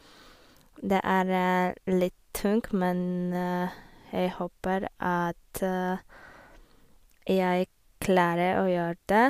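Speech, with nothing technically wrong to report.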